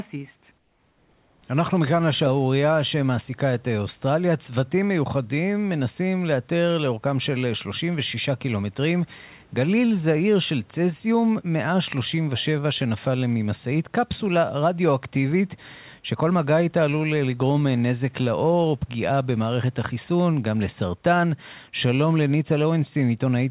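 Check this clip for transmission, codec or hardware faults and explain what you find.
One fault stands out, early in the clip, heard over a call path whose sound stops at 4 kHz, which fits G.711 A-law at 64 kbps.

Comfort noise in place of the background, 0.58 to 1.42 s: the sender most likely stopped transmitting during a pause detected as silence, and the receiver filled those 840 ms with synthetic noise. The real room noise gives way to a flat, featureless hiss about 3 dB quieter, then the genuine background returns when the speech resumes.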